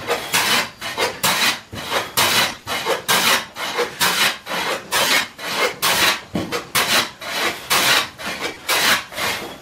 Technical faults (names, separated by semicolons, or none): lost LE Audio frames